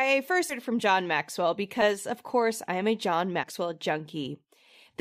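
Speech clip with compressed frames skipped, at 0.49 to 0.54 s before "it from", at 1.81 s before "of course I am", and at 3.43 s. Each time roughly 70 ms of audio vanishes, fitting about three lost 20 ms frames. At each gap the speech jumps ahead.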